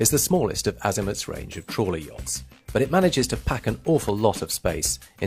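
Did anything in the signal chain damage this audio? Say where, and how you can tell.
No, no stage in the chain damaged this audio.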